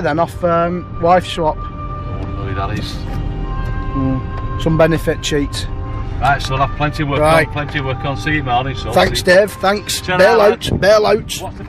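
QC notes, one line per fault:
No technical faults can be heard anywhere in the audio.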